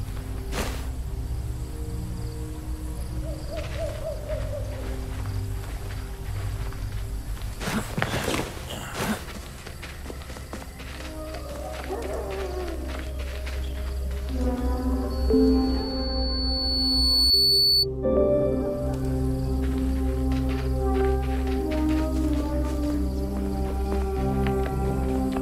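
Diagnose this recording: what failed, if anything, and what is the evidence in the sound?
The microphone hears its own loudspeaker, with loop gain above unity at 4.4 kHz: loudspeaker feedback squeal swells between 15.10 and 17.87 s.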